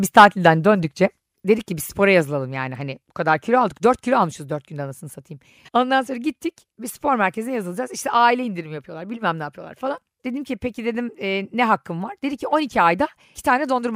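A speech recording where the microphone input was likely set too high, producing microphone overload from 0.17 to 0.48 s: peaks exceed the converter's limit by about 5 dB, flattening a small share of samples and adding harsh crackle just before "döndükçe dedik ki bir". The input gain was then likely cut in microphone volume stepped-down events at 0.2 s (about 2 dB), 1.2 s (about 4 dB), 2.22 s (about 3 dB, between "dedik ki bir spora" and "yani hani bu kadar") and 4.32 s (about 2 dB), each causing an abrupt drop in level.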